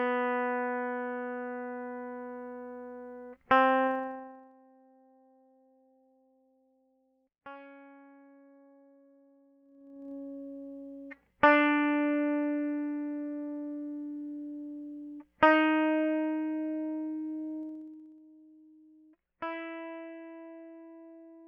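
Zipper noise at 3.85–4.53 s, 9.61–10.12 s and 17.60–18.20 s: each level move is made in 2 dB steps that tick audibly, unlike a smooth fade.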